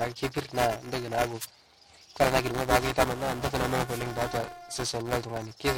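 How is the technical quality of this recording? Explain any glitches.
Technical quality is poor, with two distinct faults.

A robotic buzz at about 345 Hz runs under the speech throughout. This is buffer tearing: writer and reader cross inside each period, which fits a 128-sample buffer, so roughly a sixth of each holds audio about 10 ms stale.

Short swishes of static at 1.40–1.46 s and 3.86–4.02 s are wireless microphone noise hits, where the radio signal fades and receiver noise briefly rises.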